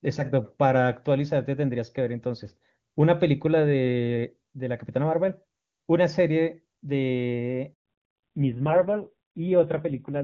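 At 7.74 s the speech cuts out for 120 ms, a handover gap. The call was passed between networks and no speech frames arrived during the switch, so the sound collapses to silence almost instantly and whatever was said in that interval is simply gone.

From 7.86 s to the end there is a fallback to narrowband. Up to this point the audio has the full, clean band of AMR wideband (HD Voice), consistent with its top rate of around 23.85 kbit/s. After the gap, nothing remains above 4 kHz, and the speech turns muffled and gritty, which points to AMR-NB at a low rate near 5.9 kbit/s.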